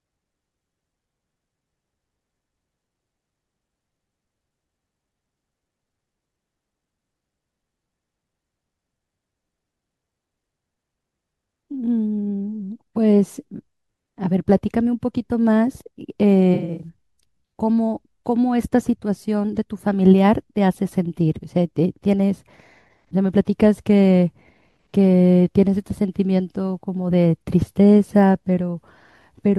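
From 16.54 to 16.88 s there is AAC frame loss with concealment. About 192 ms of audio went missing in several gaps spread over roughly a quarter of a second, the longest around a tenth of a second, which fits nine lost AAC frames. The decoder bridged each gap by reusing the last good spectrum, so the speech turns smeared and phasey. On a spectrogram, harmonics blur into flat, held bands.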